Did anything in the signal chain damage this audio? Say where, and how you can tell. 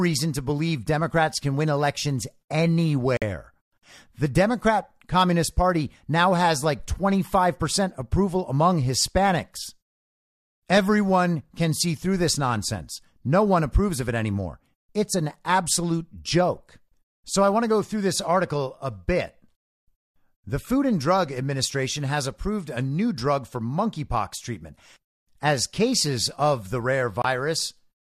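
Yes, a digital broadcast dropout at reception: the speech mutes for about 50 ms at 3.17 s and about 30 ms at 27.22 s, after "as cases of the", as failed frames were silenced.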